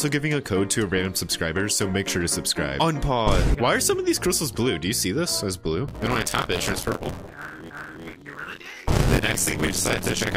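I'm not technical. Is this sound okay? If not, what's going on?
No. From about 5.88 s to the end there's buffer tearing: the playback and the program feeding it slip out of step, so roughly a third of each chunk is stale audio from a moment earlier. That gives a steady robotic buzz near 86 Hz, which fits a 512-sample buffer.

At 7.70 s there's a CD skip: the disc player's laser jumped to a different spot on the disc. You hear a tiny tick, with the sound dropping out for a few milliseconds, and then it carries on from somewhere else.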